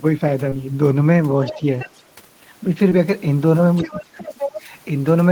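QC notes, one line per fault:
0.49–0.54 s and 2.90–2.93 s, short concealed packet loss. About 20 ms of audio failed to arrive in time at each point. The receiver covered the gap by extending the sound just before it, for about 22 ms the first time and 16 ms the second. It then crossfaded back into the real signal. The result is a brief smear or wobble, and a very short sound can go missing.
1.44–1.61 s, 1.79–2.03 s and 3.76–4.55 s, other side's voice leaking through. A second voice can be heard under the main talker. It sits roughly 15 dB down in the first stretch and roughly 20 dB down in the second. The longest stretch is louder, only about 10 dB below. The likely cause is an echo canceller that left part of the far-end loudspeaker signal in the microphone feed.
1.57–1.61 s, 3.84–4.23 s and 4.64–4.70 s, speech suppressed in double talk. The main voice dips while the far side is playing on the loudspeaker. 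The first and last dips are shallow, around 5 dB, and very brief. The middle one drops by roughly 15 dB for about a fifth of a second. There the voice sounds pulled back. The likely cause is an echo canceller that could not separate the two talkers and turned both down.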